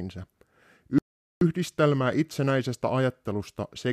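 At 0.98 s the speech cuts out in mid-flow and stays silent until 1.41 s, a gap of about 430 ms. This is a playback stall. The player likely ran short of data or was blocked. Speech then resumes after the silence.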